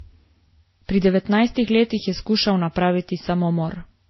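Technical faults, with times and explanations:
Throughout, transcoding between lossy codecs: the speech has nothing above about 5.8 kHz, so it sounds dull and boxy, and on top of that you get a mix of smeared, swirly artefacts and brittle, watery ones that don't belong to any single codec. That combination likely comes from the audio passing through several lossy stages, which fits a very low-rate MP3 followed by WMA and then Vorbis. Each later stage re-encodes the earlier damage and adds its own, and the 5.8 kHz ceiling from the harshest stage carries through to the end.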